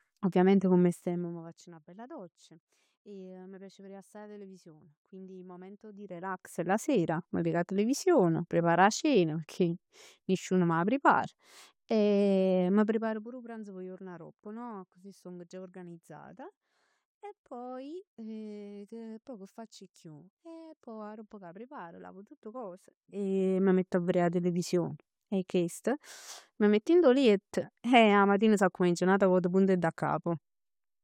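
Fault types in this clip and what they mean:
No fault types can be heard in this clip, so there is nothing to explain.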